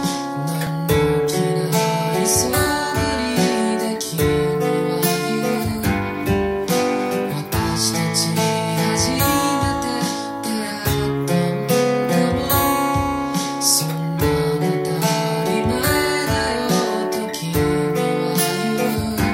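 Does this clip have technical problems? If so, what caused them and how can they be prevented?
Yes. At 0.67 s there is a repeated buffer: audio did not reach the output in time, so the device replayed its last block twice more. Each repeat lasts only about 1.33 ms, which fits a 64-sample buffer, so the two hard joins merge into a brief click or buzz rather than an audible stutter. Nothing seems to be lost, which sets it apart from a dropout, where the sound breaks into a gap of silence. Using a larger buffer and keeping the processing load low, so that each block arrives before it is due, would prevent it.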